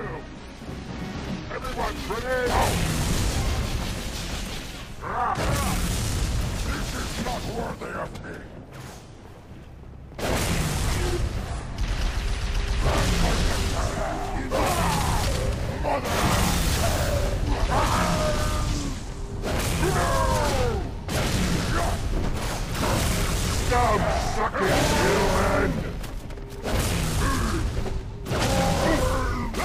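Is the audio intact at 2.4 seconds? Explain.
Yes, at 2.4 seconds the audio plays through cleanly, with no dropout, click, distortion or other fault to be heard.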